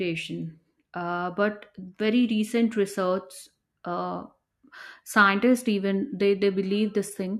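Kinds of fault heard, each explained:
No kinds of fault are heard in this clip.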